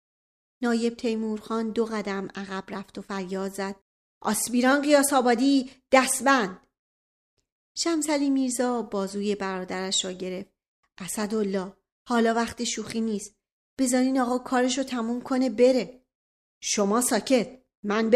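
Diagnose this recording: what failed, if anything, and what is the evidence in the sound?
Nothing in the signal chain has failed: the speech signal stays continuous and stable throughout, with no audible fault at any stage from capture to playback.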